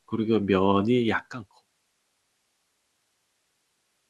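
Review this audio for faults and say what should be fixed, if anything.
A block size mismatch (truncated) runs through the whole speech clip: a steady buzz at 46.9 Hz, which fits a 1024-sample block. The stage that reads each block takes slightly less than was written and drops the end, so every block boundary becomes a small jump. Playback speed stays at 1.0x, so the loss per block is tiny. A waveform shows faint steps about every 21 ms, and a spectrogram shows evenly spaced vertical striations with a harmonic comb at multiples of 46.9 Hz. The smooth fade-out from around 1 s to 1.67 s is clean, but the buzz continues beneath it. Matching the buffer sizes at every stage, or buffering partial blocks instead of discarding them, would prevent this.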